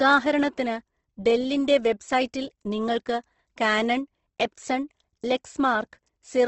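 A speech recording with plainly audible Opus compression across the whole clip. The sound has a grainy, rough, noisy texture rather than a swirling one. That fits the codec's music (CELT) mode refilling starved bands with folded or noise-like content, likely at a low bitrate around 16 kbps. On a spectrogram there is a hard ceiling at 8.2 kHz with nothing above it, and the bands below look evenly filled but speckled rather than holed.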